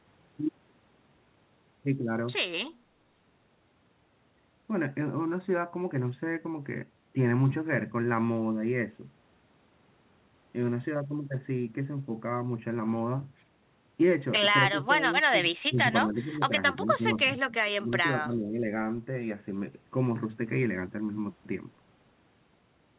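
An echo canceller, likely confused during double talk, mistook the talker for far-end echo and turned them down. This is speech suppressed in double talk. The speech dips or briefly drops out at 14.72, 15.68, 16.06, 16.77, 17.43, 17.63 and 18.25 s, with the deepest dips around 20 dB.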